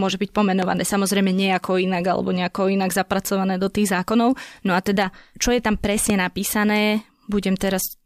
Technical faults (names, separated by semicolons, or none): loud pop